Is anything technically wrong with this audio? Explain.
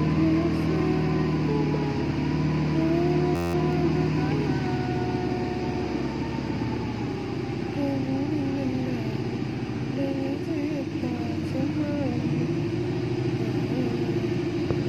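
Yes. A system hang loop occurs from 3.36 to 3.54 s. The system froze while the audio hardware kept replaying its ring buffer, so one 11.61 ms slice, consistent with a 512-sample buffer, repeats 16 times, producing a steady buzz at 86.1 Hz.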